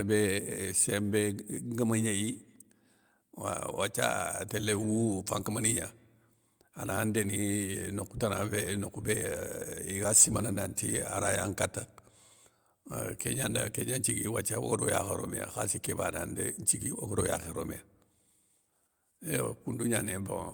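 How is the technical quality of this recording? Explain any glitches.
No technical glitches can be heard in the recording. The speech runs without any interruption, distortion or other audible problem at any point.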